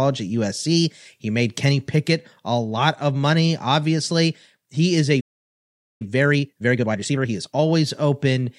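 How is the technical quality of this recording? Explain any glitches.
The speech is interrupted by one glitch that leads straight into a second: a stall, then a hurried stretch as playback catches up.

Playback stall, 5.2 to 6.02 s: just after "obviously he is a", the audio cuts out in mid-flow and stays silent for about 0.8 s. This is likely the player running dry of buffered data, or its audio thread being held up, so nothing reaches the output until it recovers. The speech then resumes from the point where it stopped.

Time-compressed catch-up, 6.02 to 7.6 s: right after the stall, the player works off the delay it built up by removing small slices of audio and cross-fading over the joins. The speech runs at about 1.5 times normal speed but keeps its normal pitch. It sounds rushed, and settles back to normal pace by 7.6 s.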